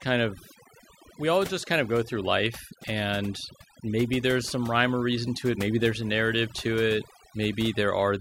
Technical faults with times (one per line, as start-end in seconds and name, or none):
0.00-8.20 overdone noise removal